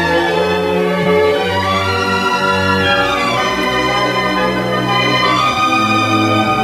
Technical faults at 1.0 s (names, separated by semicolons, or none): corrupt frame concealed